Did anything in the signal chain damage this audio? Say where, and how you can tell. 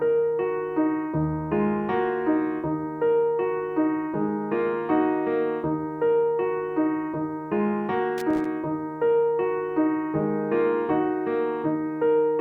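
Yes: a loose connector crackle in the analogue wiring, where a worn contact kept breaking and remaking, chopping the signal into irregular scratchy crackle from 8.18 to 8.45 s.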